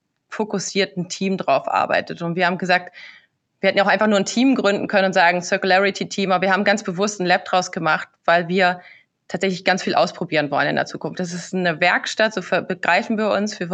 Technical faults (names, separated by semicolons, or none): none